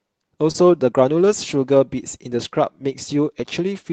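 Speech carried over a call link, and you can hear two kinds of packet trouble. Around 0.51 to 0.56 s there's a short concealed packet loss. About 20 ms of audio never arrived in time, so the receiver stretched the preceding sound over the gap for roughly 27 ms before easing back into the real signal. It comes across as a quick smear or wobble, the kind of thing that can swallow a short consonant. Overlapping the end of that, from 0.54 to 0.56 s, and again from 1.96 to 2.02 s, you get a lost packet rebuilt from error correction. Instead of a gap, the decoder played the low-bitrate backup copy that Opus tucks into the following packet. So those stretches, 20 ms and then 40 ms (the second covering two lost packets), turn briefly rougher and noisier. The call path itself has its usual coding texture, with the top end rolling off around 8 kHz, which fits a codec running at about 24 kbps.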